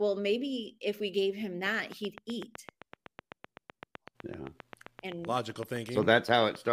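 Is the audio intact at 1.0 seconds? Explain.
Yes, the speech at 1.0 seconds plays through intact, with no fault at that moment.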